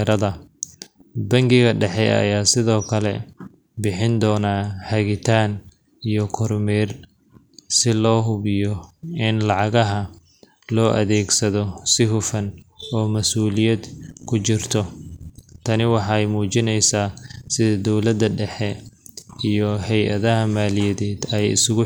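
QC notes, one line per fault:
Nothing stood out on listening to this speech recording.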